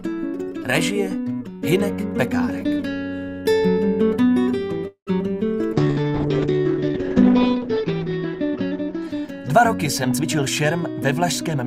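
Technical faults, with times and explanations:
4.87 to 5.10 s, call audio freeze: The sound stops moving forward. For about 190 ms the last sound carries on as a fading buzz or hiss, and roughly the final 100 ms of that is silence. The audio then resumes from exactly where it stopped, with nothing skipped, and everything after it is now about 190 ms later. This is likely packets held up in transit, so the jitter buffer ran dry and the receiver filled the wait.
5.75 to 10.23 s, call bitrate drop: The audio turns coarse and watery, and the top end disappears. The encoder's rate fell from 64 kbps to about 9 kbps after the call's bandwidth estimate dropped. At that rate Opus quantises much more roughly and narrows its coded band from 20 kHz to 8 kHz. The worst stretch lasts about 2 s before the rate climbs back and the detail returns.
5.91 to 5.99 s, burst of packet loss: This happens during the low-bitrate stretch. 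A run of packets was lost or arrived too late to play. For about 56 ms the receiver extends the last sound as a held buzz or fading hiss, then jumps ahead. About 60 ms of audio is gone for good, so the continuation lands slightly further on than the sound that came before it.
10.14 to 10.81 s, jitter buffer speed-up: The audio runs about 12% fast and sounds hurried, but the pitch stays the same. The jitter buffer was holding more than its target, so to cut the excess delay the receiver repeatedly removed short pitch-period-length pieces. In total it removed roughly a tenth of a second, which compresses the timing of this passage. This begins just as the bitrate is recovering.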